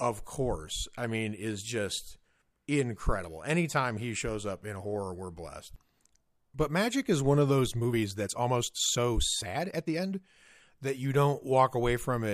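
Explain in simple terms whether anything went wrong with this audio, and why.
Something did go wrong, in one stretch of this speech clip. From 7.76 s to 10.24 s, right after "is one of those", the talking suddenly rushes ahead. It plays at about 1.53 times normal speed, yet the pitch of the voice does not rise. That is the sign of a time-stretched section. Software likely squeezed this part to fit a shorter length. It keeps the pitch by cutting out tiny slices of sound, so the pace jumps abruptly.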